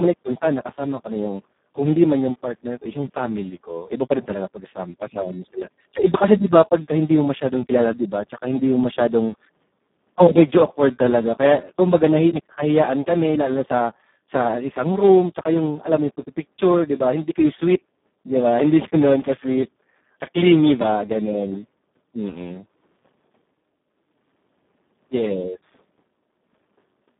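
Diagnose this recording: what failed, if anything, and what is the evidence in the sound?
Codec stage: Speex coding throughout leaves the speech noisy and hoarse, band-limited to about 150 Hz–3.6 kHz with nothing above 3.8 kHz, which fits a starved setting near 4 kbps.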